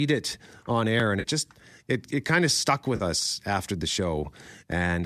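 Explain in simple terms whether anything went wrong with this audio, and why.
Twice, at 1.20 to 1.27 s and 2.96 to 3.03 s, the speech briefly turns smeared and noisy. This is AAC frame loss with concealment: about 40 ms of audio went missing, and the decoder filled the gap by reusing the last good sound. The speech was carried by low-delay AAC compression, likely AAC-ELD, which leaves only light coding damage.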